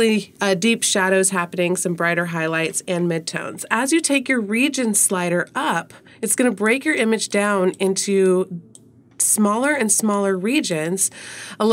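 No audible technical faults.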